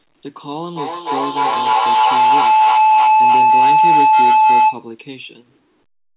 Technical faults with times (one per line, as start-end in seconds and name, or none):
0.76-4.91 feedback howl